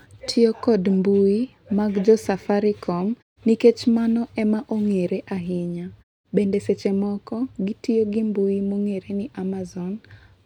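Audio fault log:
No faults heard anywhere in the speech.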